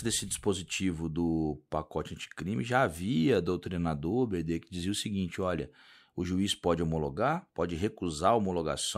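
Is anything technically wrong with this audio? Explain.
No, nothing technically wrong turns up anywhere in this speech recording.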